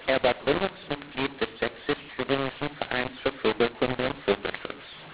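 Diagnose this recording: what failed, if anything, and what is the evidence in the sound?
The codec stage failed because of a mu-law and A-law mix-up. The speech was encoded as A-law but decoded as mu-law, so every 8-bit code maps to the wrong level throughout the recording. Some levels come out too large and others too small, and the quietest samples are pushed well above silence. The speech sounds harsh and distorted, and the pauses fill with hiss instead of going quiet. On the waveform, the peaks look misshapen and the gaps sit on a raised noise floor. On the spectrogram, broadband grit fills the pauses, all of it still capped at 4 kHz by the 8,000-sample telephone coding.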